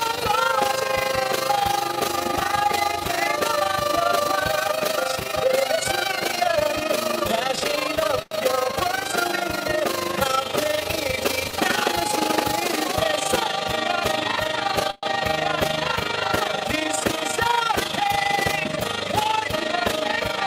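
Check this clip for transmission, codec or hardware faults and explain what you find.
A rough, fast flutter runs through the whole clip: overlap-add ripple. The level pulses by about 11 dB around 30 times a second because framed audio was rejoined with overlaps that don't sum evenly.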